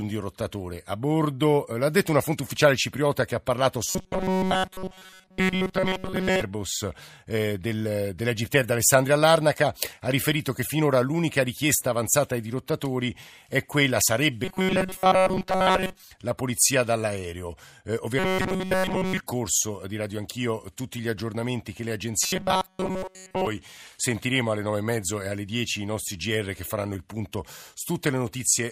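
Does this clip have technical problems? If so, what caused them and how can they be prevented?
Yes. Robotic sound from repeated short buffers occurs at 3.86–6.41 s, 14.45–16.03 s, 18.19–19.21 s and 22.23–23.47 s. The speech becomes a rigid metallic buzz at 188 Hz. This likely comes from a 5.3 ms fragment being looped while most incoming audio is skipped. Prevent it by keeping the audio buffer fed steadily.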